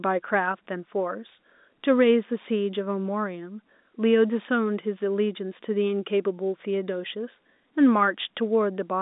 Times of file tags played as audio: none

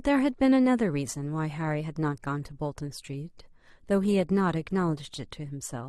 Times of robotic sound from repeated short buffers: none

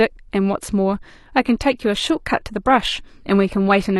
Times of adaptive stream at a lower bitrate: 1.40-4.00

